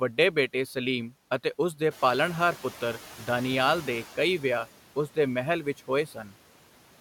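Noise suppressor artifacts run through the whole clip. The suppressor pulls down every band it judges to be steady noise, frame by frame, by about 12 dB here. The background sinks in the gaps between words and comes back up underneath them, so the floor pumps in time with the speech.

From 1.9 s to 4.05 s the noise suppressor is catching up. The room noise, which is part of the recording, steps up by about 12 dB around 2 s. The suppressor's noise estimate lags that jump, so for 2.15 s the louder background passes with only about 8 dB of reduction. Then it sinks as the estimate settles on the new level.

Between 6.07 s and 6.32 s there is speech cut by the noise suppressor. The suppressor classifies part of the speech as noise and turns it down along with the background, by about 8 dB at the deepest point, across roughly 150 ms in total. Those soft portions come out swallowed and faint.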